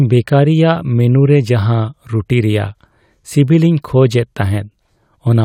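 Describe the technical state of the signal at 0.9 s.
At 0.9 s the speech signal is intact, with no audible fault at that moment.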